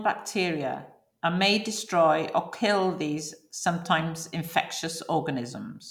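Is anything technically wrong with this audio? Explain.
No, nothing technically wrong can be heard in this speech recording.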